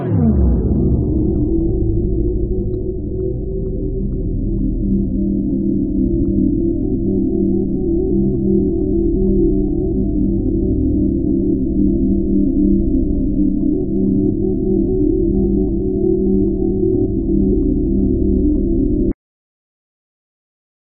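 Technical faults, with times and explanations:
6.22, 8.09, 9.67, 15.43, 16.44 and 17.52 s: compressed frames skipped. The sound jumps ahead by roughly 150 to 700 ms, consistent with dropping whole frames of about 21 ms.
19.12 s: cut-off end. The final buffers never got written, so the sound stops mid-event and falls straight to digital silence with no natural decay.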